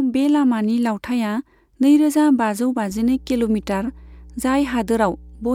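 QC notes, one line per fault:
2.91–5.55 s: mains hum. A steady low tone at 60 Hz, with low harmonics above it, enters at 2.91 s and continues to the end of the clip. It sits roughly 25 dB below the speech. The power line is coupling into the signal through a ground loop or a nearby transformer, which produces a fixed-pitch drone locked to the mains frequency.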